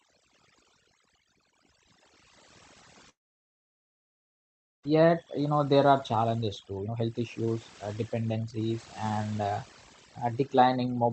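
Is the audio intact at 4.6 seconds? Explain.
No. At 4.6 seconds the audio sits inside a long network dropout running from 3.09 to 4.87 seconds. Almost all of that stretch is silence. The receiver briefly carried the last sound forward, then went quiet. About a second of the original audio never returns. A long gap in arriving packets is the likely cause, with the timing shifting by roughly 0.7 seconds. Overdone noise removal also runs through the whole clip. A noise suppressor set too strong cuts frequency bands near its noise estimate. The background drops and breaks up into twinkling specks.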